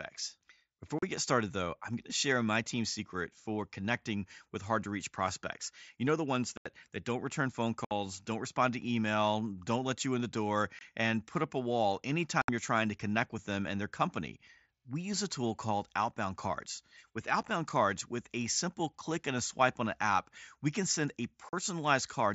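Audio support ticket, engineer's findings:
Dropouts at 0.99–1.03 s (before "get started though I'm"), 6.57–6.66 s (after "know the ones"), 7.85–7.91 s (before "don't respond to email"), 10.79–10.81 s, 12.42–12.49 s, 17.42–17.48 s, 21.49–21.53 s. Unconcealed Bluetooth headset packet loss on the headset-to-phone link. Gaps are 22 to 83 ms with hard edges. At 17.42 s the losses are scattered over 60 ms, each run under 8 ms, so the sound turns rough there. Missing packets are replaced with silence or an idle pattern, not concealed. Wideband mSBC path throughout, light codec damage.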